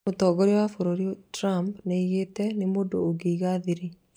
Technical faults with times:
none

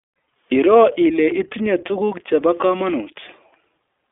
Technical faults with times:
0.00-4.11 iLBC codec

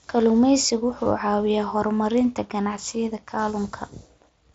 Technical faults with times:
1.04 concealed Bluetooth headset packet loss
2.24 concealed Bluetooth headset packet loss

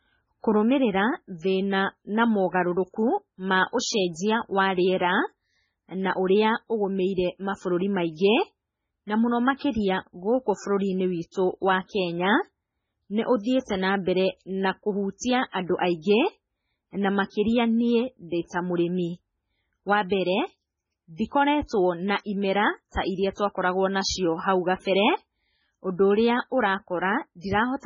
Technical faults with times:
0.00-27.86 MP3 compression

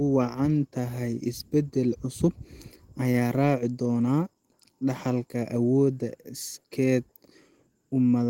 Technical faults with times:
none

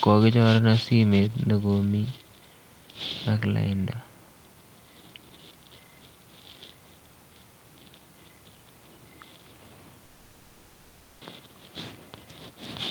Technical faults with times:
10.05-11.23 long network dropout

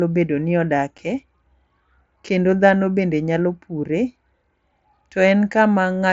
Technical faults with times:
0.98 unconcealed Bluetooth headset packet loss

